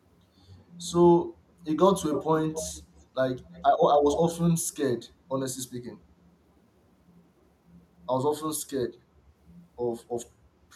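Echo leak appears in four short bursts: 2.12 to 2.27 s, 2.53 to 2.82 s, 3.53 to 3.63 s and 4.11 to 4.17 s. A copy of the speech returns 240 ms late. It sits about 10 dB below the direct speech, except at 3.53 s, where it is about 30 dB down and barely there. The likely cause is a far-end loudspeaker whose echo canceller let part of its microphone pickup slip back into the call.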